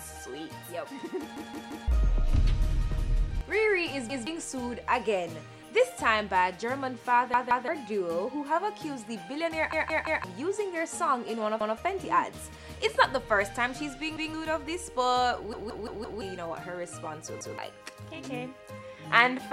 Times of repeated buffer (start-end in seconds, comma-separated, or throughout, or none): 1.37-1.88, 4.10-4.27, 7.34-7.68, 9.73-10.24, 11.61-11.78, 14.17-14.34, 15.53-16.21, 17.41-17.58